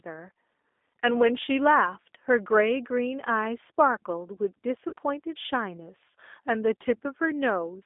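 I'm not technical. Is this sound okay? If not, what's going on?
No. The whole recording sounds thin, slightly rough and a bit robotic, like an internet phone call. That comes from the G.729 codec, which rebuilds the voice from a simplified model and passes only a narrow middle range of pitch, roughly 250 Hz to 3.6 kHz.

At about 4.89 to 4.93 s, there is a brief stretched, fading sound. This is VoIP packet loss concealed by the speech codec: about 30 ms of audio went missing, and the decoder filled the gap by stretching the sound just before it.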